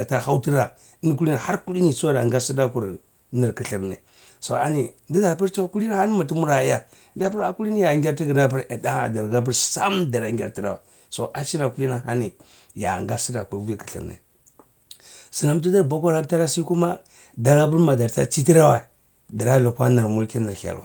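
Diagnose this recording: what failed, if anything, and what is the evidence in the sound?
The network lost packets, and they were rebuilt from error correction between 7.19 and 7.41 s. There is no gap, but the speech turns rougher and noisier. This fits six packets, about 120 ms of audio, played from low-bitrate copies in the packets that followed. A spectrogram shows grainier, smeared harmonics there, and the waveform stays continuous.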